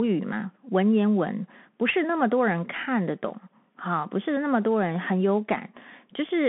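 Bluetooth CVSD headset codec, throughout the clip: the speech has passed through the narrowband Bluetooth headset path, which encodes each sample as a single up-or-down bit and adapts its step size. The band runs only from 150 Hz to 3.5 kHz, so everything above is missing. Fast, loud high-frequency movement outruns the step and distorts, s sounds come out scratchy, and a granular hiss sits beneath the speech, which fits a 64 kbps CVSD stream.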